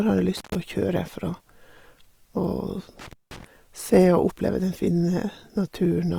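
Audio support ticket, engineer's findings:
Rough, grainy texture on the speech throughout; full bandwidth kept, content reaching about 20.3 kHz. Likely cause: Opus compression in its music (CELT) mode at a rate that fits 24 kbps. Starved bands are filled with folded or noise energy, not left empty.

Dropouts with crackle at onset and release, 0.37–0.55 s and 2.99–3.45 s; line open about 117 ms and 186 ms, faint hiss in the gaps. Intermittent contact: loose plug or cable briefly breaking the signal path.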